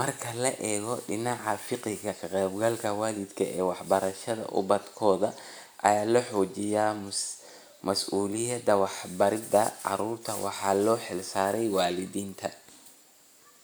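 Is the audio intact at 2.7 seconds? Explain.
Yes, at 2.7 seconds the audio is intact, with no dropout, click, distortion or other fault at that moment.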